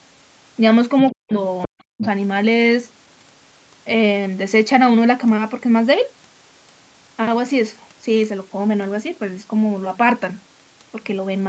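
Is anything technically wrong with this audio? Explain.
Yes. Two related faults occur in the first few seconds of this speech clip.

Other side's voice leaking through happens at 1.08 to 1.15 s, 1.62 to 1.81 s and 2.02 to 2.07 s. A second voice sits under the talker. It starts very faint and gets louder each time, reaching only about 10 dB below the speech by the last burst. The likely cause is a loudspeaker feeding the far side into the microphone, with the echo canceller not removing all of it.

Speech suppressed in double talk happens at 1.12 to 1.32 s and 1.67 to 2.03 s. The talker's voice suddenly drops away, by roughly 40 dB at its deepest, while the far side is playing on the loudspeaker. Each dip lasts a fraction of a second. The likely cause is the echo canceller failing to tell the talker from the echo when both spoke at once, so it turned the whole signal down.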